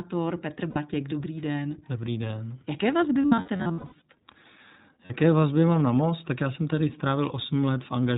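Throughout, the speech carries the iLBC codec's narrowband sound. Nothing passes above 4 kHz, so a spectrogram shows a hard ceiling there, and the plainly audible roughness and synthetic edge fit the 15.2 kbps mode with 20 ms frames.

Lost iLBC frames occur at 0.70 to 0.78 s, then scattered from 3.22 to 4.02 s (about half a second missing, longest run roughly 100 ms), and at 5.06 to 5.12 s, just before "vazby mám na most". Each gap becomes a held, buzzy vowel from a repeated pitch cycle mixed with noise. On the spectrogram these show as flat, smeared harmonic bands, and on the waveform as a regular repeating pattern. The voice recovers immediately after each gap.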